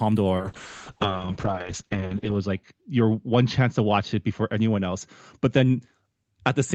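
A call bitrate drop starts at 0.39 s and lasts to the end of the clip. The encoder falls from 32 to 7 kbps, staying at its lowest for about 2 s, and audio bandwidth narrows from 20 kHz to 8 kHz, so the speech turns muffled, rough and watery.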